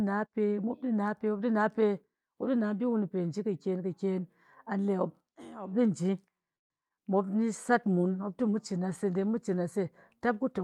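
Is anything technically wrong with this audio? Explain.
Yes, there are four faults of three kinds in the second half of this speech clip.

A call audio freeze runs from 6.55 to 6.72 s. The speech stops and about 140 ms of near-silence is heard, with a brief trailing continuation of the last sound just before it. This is likely caused by packets stalling in transit until the jitter buffer drained, so the receiver had nothing new to play. When delivery resumes, the speech picks up where it left off, so nothing is lost. The pause simply adds about 147 ms of delay.

Short concealed packet loss follows at 6.88–6.92 s and again at 6.96–7.00 s. Each time, about 20 ms of audio failed to reach the decoder in time, and the receiver covered the hole by extending the preceding sound before blending back into the real signal. The result is two quick smears or wobbles close together, and any brief consonant falling inside those windows can go missing.

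A call bitrate drop begins at 7.38 s and lasts to the end of the clip. The encoder's rate falls from 64 kbps to 23 kbps after the connection's bandwidth estimate collapsed, so the codec quantises the speech more coarsely and trims upper frequencies to save bits. The voice turns rough, watery or muffled for the remaining three seconds or so, with no recovery before the clip ends.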